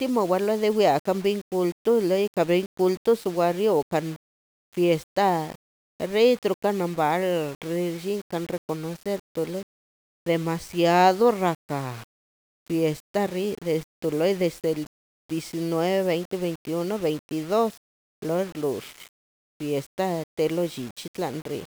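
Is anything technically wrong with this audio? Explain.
Yes. Low bit depth without dither runs through the whole speech clip. The grainy distortion that tracks the signal, sitting only about 25 dB below it, points to likely rounding to roughly 6 bits without dither. Quiet syllables turn gritty and the softest tails sputter or drop to silence.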